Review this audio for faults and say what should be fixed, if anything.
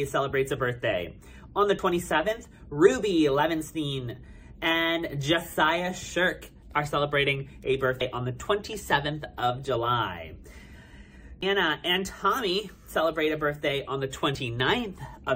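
Damaged data in a compressed stream causes short glitches at 1.78, 4.52 to 4.54, 8.00, 11.41 and 14.34 s. Corrupted bytes make the decoder misread frames and lose sync. Prevent it by checksumming files and transfers and re-fetching any corrupted segments.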